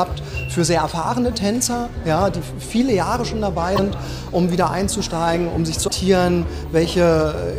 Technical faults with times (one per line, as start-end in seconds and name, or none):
3.75-3.79 broken MP3 bit reservoir
5.87-5.91 broken MP3 bit reservoir